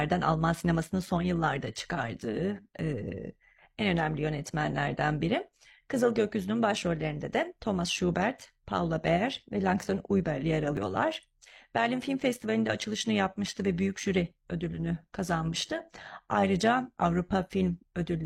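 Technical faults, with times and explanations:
Throughout, overlap-add ripple: a metallic buzz, the speech pulsing about 6 dB some 100 times a second, as reassembled frame windows don't sum evenly.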